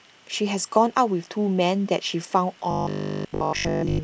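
Robotic sound from repeated short buffers runs from 2.71 s to 4.03 s in this speech clip, turning the voice into a rigid, metallic buzz that still loosely tracks the words. The buzz sits at 50 Hz, which fits a 20 ms chunk being replayed over and over, likely because fresh audio arrived too seldom and the gaps were filled with copies of the last buffer. For most of that stretch the sound is repeated rather than new, so real audio is skipped.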